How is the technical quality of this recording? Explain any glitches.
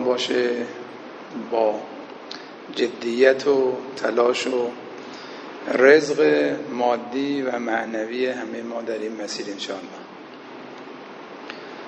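No glitches or technical faults are audible anywhere here.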